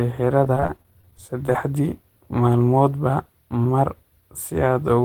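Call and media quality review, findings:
Repeated packet loss (robotic sound), 0.44–1.55 s. Choppy speech with pieces missing. Thirteen short holes, none longer than 19 ms, about 14% of the stretch concealed. Probable component: network path and jitter buffer, with loss concealment extending the last frame into each hole. Spectrogram: smeared, repeated harmonic slices and abrupt vertical seams. Waveform: copied periodic cycles and small discontinuities at each splice.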